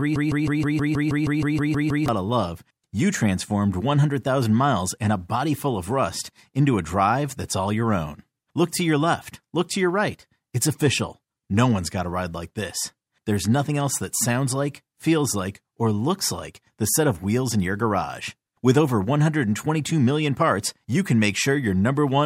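From the very start until 2.08 s the speech is caught in a broken-record loop, already under way when the clip opens. A fragment of about 160 ms repeats exactly, back to back, roughly a dozen times, giving a rapid mechanical stutter before normal playback resumes at "of love you transformed". The likely cause is a stalled player or stream that kept resending its last buffered piece, so the speech that belonged in those two seconds is missing.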